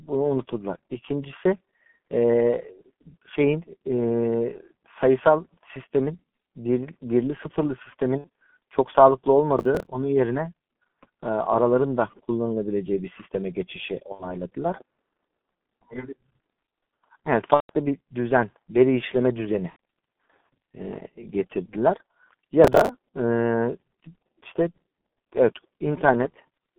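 Throughout, the G.723.1 codec at 6.3 kbit/s limits the speech to roughly 200 Hz to 3.5 kHz, with heavy coding damage: muffled, hoarse tone and blurred consonants. At 8.18 to 8.27 s, VoIP packet loss concealed by the speech codec appears. The decoder extrapolates across about 60 ms of missing audio, giving a short, fading stretch. At 9.59 to 9.87 s, processor overload crackle follows. Around ten buffers of about 10 ms each miss their deadline and repeat stale audio, heard as gritty tearing. Further concealed packet losses occur at 14.12 to 14.36 s, 17.54 to 17.70 s, 19.70 to 19.76 s and 24.72 s, covering 60, 150, 90 and 30 ms of lost audio. Another burst of overload crackle occurs at 22.64 to 22.89 s.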